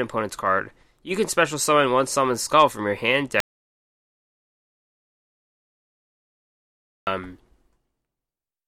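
At 3.40 s, right after "skull from your hand", the speech drops out to silence until 7.07 s, about 3.67 s lost, likely from a lost input with silence still being written. Unlike a natural pause, the gap is dead silence without any room tone.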